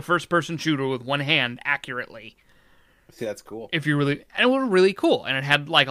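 No technical faults are audible anywhere in this speech recording.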